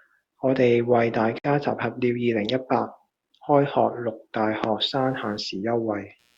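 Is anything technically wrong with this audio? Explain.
Yes. From about 4.79 s to the end of the clip at 6.37 s, a faint buzzy chirping sits well below the speech, pulsing around a hundred times a second. Its rhythm has nothing to do with the speech itself. This is computer activity noise: shifting load on the processor, graphics card or mouse disturbs the ground the audio circuit shares with the computer, so that electrical activity leaks into the recording as this low, rasping texture.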